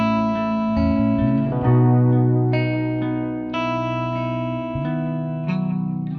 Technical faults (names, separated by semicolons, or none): none